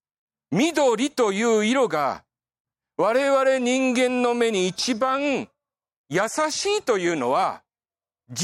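No technical faults occur at any point in the clip, so there is nothing to place in time order.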